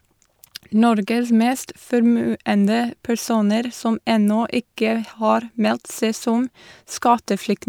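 No technical faults can be heard anywhere in the recording; the signal stays steady and intact throughout.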